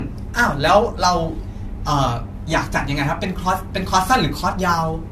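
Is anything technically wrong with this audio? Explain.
Yes. Throughout the speech there is generation loss, likely from repeated re-encoding, perhaps four times, with an AAC-type codec near 64 kbit/s. Nothing is above 14 kHz. The swirly, hollow smearing and blurred attacks are worse than a single encode would cause, because fresh quantisation errors piled up on each pass.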